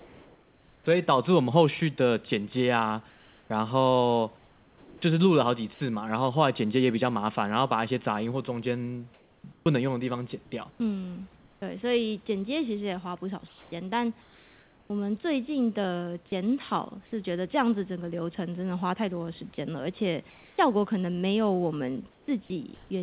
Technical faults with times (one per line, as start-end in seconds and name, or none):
0.00-0.86 comfort noise in place of the background
3.10-5.80 comfort noise in place of the background
5.74-5.80 sound dropped by the voice detector
9.14-14.90 comfort noise in place of the background
11.60 onset clipped by the voice detector
20.30-22.90 comfort noise in place of the background
20.55-20.58 onset clipped by the voice detector